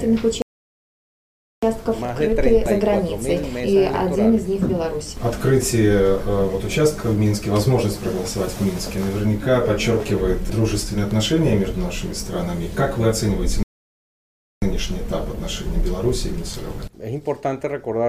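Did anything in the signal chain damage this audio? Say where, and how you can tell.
Yes: rebuffering stalls in playback at 0.42–1.63 s and 13.63–14.62 s. The player starved, inserting flat waveform gaps and blank spectrogram columns, then resumed seamlessly.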